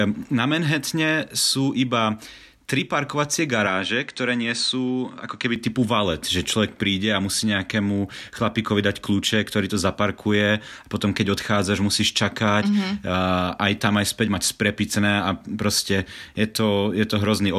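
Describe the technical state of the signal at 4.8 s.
At 4.8 s the speech sits inside a stretch from 3.67 to 5.56 s, between "tri parkovacie" and "typu valet že človek", where the input most likely switched to a poorer device. The band is cut off above 9.1 kHz, so the sound turns duller and boxier, with a faint new noise floor well below the speech. On a spectrogram the top band empties abruptly at both edges. The waveform shows no gap and no level jump.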